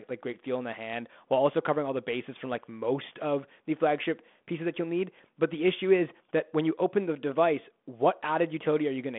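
No technical faults can be heard anywhere in the speech. It comes through a G.726 ADPCM telephone path at 32 kbit/s, with a line band of roughly 200 Hz to 3.5 kHz, nothing above 3.8 kHz, and only light codec damage.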